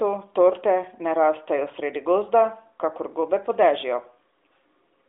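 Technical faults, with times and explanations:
No technical faults can be heard anywhere in this recording.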